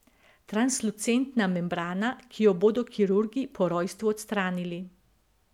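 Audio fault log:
Nothing to log here: the speech comes through steady and unbroken, with no faults to report anywhere in the clip.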